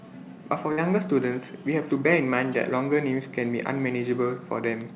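A burst of packet loss hits this speech recording at 0.72 s and lasts to about 0.79 s. The receiver covered roughly 53 ms by extending the last sound and letting it fade into a brief held buzz or hiss. About 60 ms of the original is gone, so the speech jumps forward when it resumes. Through the call path the audio stops at 4 kHz, which fits G.711 mu-law coding.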